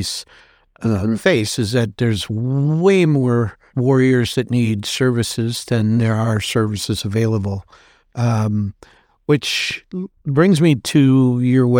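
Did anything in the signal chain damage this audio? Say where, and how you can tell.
No, nothing in the signal chain damaged this audio.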